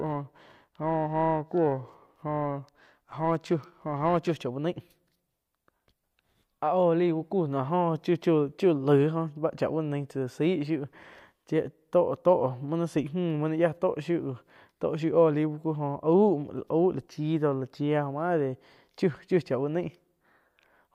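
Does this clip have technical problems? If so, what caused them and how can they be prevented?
Yes. Periodic clock jitter affects the speech from 0 to 4.32 s, ending just before "chá uh naih". Interference wobbles the converter's clock at around 1 kHz. Every component gains sidebands at that spacing, giving a rough, metallic edge. A clean, well-shielded clock supply prevents it.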